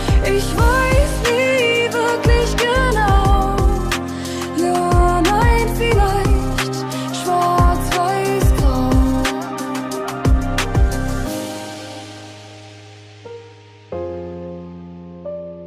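No technical fault can be heard anywhere in the audio. Nothing breaks, drops out or shifts at any point.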